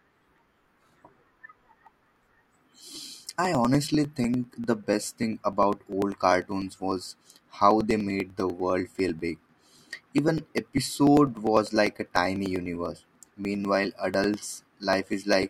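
From about 0.08 s to 15.43 s the speech carries periodic USB or driver dropouts. Roughly every 0.099 s something stalls the audio path and about a millisecond of signal is skipped outright, not replaced by silence, so the waveform jumps and each splice clicks. The result is a steady ticking, around ten per second, heard only under speech. A spectrogram shows evenly spaced thin vertical broadband lines; the waveform shows small discontinuities at the same spacing.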